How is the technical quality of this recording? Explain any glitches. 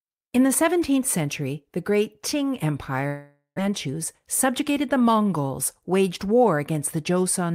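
The recording has two network-related glitches close together in the middle.

From 3.07 to 3.60 s, a long network dropout is likely: the sound smears into a fading buzz, then 120 ms of silence, with about 400 ms of audio lost.

From 3.68 to 5.10 s, a jitter buffer speed-up trims about a tenth of a second of pitch periods, so the speech runs 6% fast and sounds slightly hurried.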